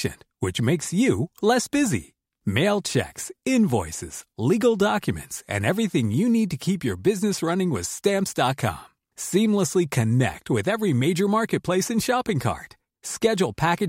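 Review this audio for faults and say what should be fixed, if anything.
At 10.33 s, just before "with every major marketplace", the speech has an underrun with a held sample. The output buffer ran dry for about 2.9 ms, which is 128 samples, and the converter froze on its last value instead of falling to zero. Unlike a dropout to silence, the flat stretch holds the last value, so it begins almost without a click, and a few milliseconds of live audio were lost. Larger output buffers or higher audio-thread priority would prevent it.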